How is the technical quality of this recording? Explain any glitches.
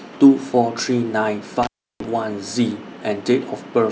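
The recording has one clear glitch, an intermittent contact. From 1.63 to 2.05 s, a loose connection opens for about 0.33 s. The speech drops to faint hiss with crackles at each edge, which show as a waveform gap bracketed by broadband spikes.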